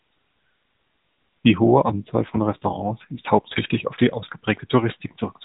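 From 1.88 s to 3.30 s, ending just before "hauptsächlich auf die", an AMR rate drop turns the speech rougher and more synthetic, with no gap or bandwidth change. The coarser excitation fits the codec stepping down from 12.2 to 5.9 kbps, then recovering.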